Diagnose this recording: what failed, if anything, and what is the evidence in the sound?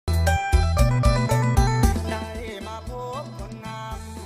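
Nothing failed; no fault is audible anywhere in this recording.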